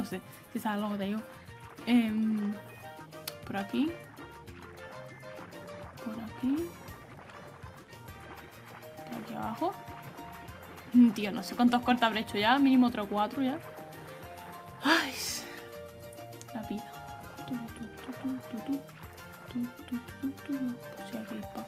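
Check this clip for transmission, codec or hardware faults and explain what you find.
No transmission, codec or hardware faults turn up anywhere in this clip.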